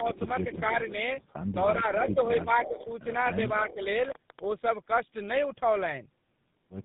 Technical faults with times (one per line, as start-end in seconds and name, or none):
0.00-6.85 tandem speech coding